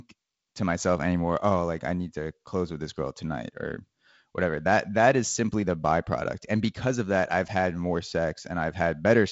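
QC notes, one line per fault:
Nothing to flag here; the speech comes through G.722 wideband telephone coding, with the content stopping around 7.7 kHz and the light coding texture you'd expect from a lower rate, which fits 48 kbit/s.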